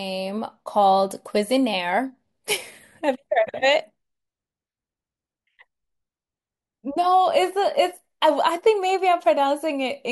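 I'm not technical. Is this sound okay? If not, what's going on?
Yes, it's fine: I didn't hear any technical problems anywhere in this recording, so there's nothing to worry about.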